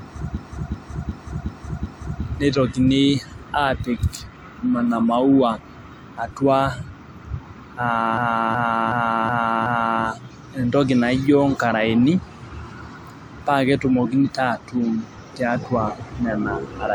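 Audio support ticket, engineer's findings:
System hang loop, 0.37–2.23 s and 8.17–10.03 s: a 371.52 ms speech segment repeats exactly, 5 times each, at 2.69 Hz. This fits a driver or system stall while the hardware replayed a 16384-sample ring buffer. Spectrogram and waveform show identical blocks tiled side by side. Little or no audio is lost.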